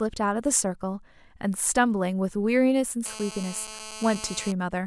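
From about 3.06 s to 4.52 s the speech picks up a GSM phone buzz: a hard, raspy drone at roughly 217 Hz, thick with harmonics and sitting about 14 dB below the speech. A 2G handset close to the gear is firing radio bursts 217 times a second, and some part of the audio circuit rectifies those pulses into audible buzz. It holds nearly steady, which is the signature of a phone on an active call.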